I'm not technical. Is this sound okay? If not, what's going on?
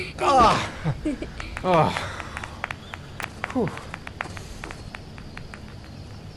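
No. At about 3.23 seconds there is an electrical switching spike. The likely cause is a nearby switch, motor or static discharge sending a brief burst of electrical interference into the audio cable or equipment, which then records it along with everything else. You hear it as a sharp snap or a tight cluster of clicks, lasting only a split second and sitting on top of the sound rather than replacing it.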